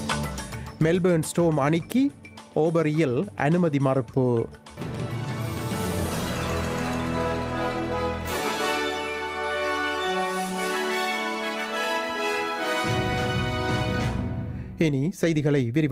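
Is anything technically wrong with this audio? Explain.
No, nothing is technically wrong with this audio.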